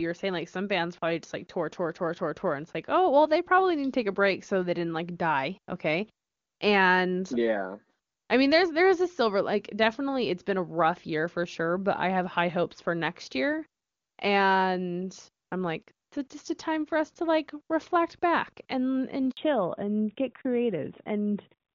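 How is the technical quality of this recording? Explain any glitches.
The recording has two linked glitches near the end. Both come from a network change during the call.

At 19.31 s, just after "reflect back and and", there is a handover gap. The phone switched networks and no speech frames arrived for 60 ms. The sound dies away quickly. Silence holds until 19.37 s.

From 19.37 s to the end, there is a fallback to narrowband. The call left HD Voice for an older narrowband codec. Nothing above 4 kHz remains. Before the switch, the wideband sound was clean, which fits a high AMR-WB rate. After it, the sound is duller and rougher, which fits the 12.2 kbit/s AMR-NB mode.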